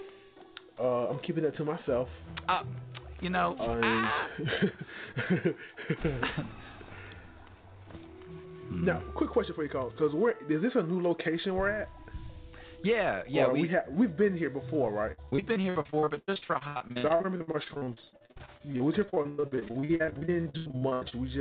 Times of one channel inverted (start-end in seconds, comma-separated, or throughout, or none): none